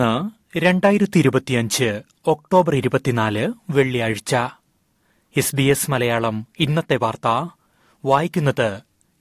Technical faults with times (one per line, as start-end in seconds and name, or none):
none